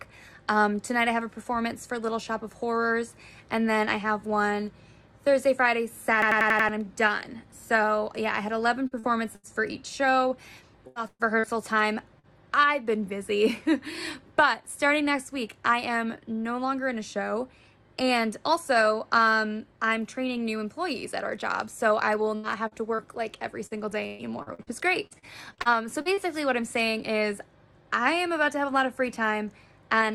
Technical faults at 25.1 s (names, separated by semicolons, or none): repeated packet loss (robotic sound)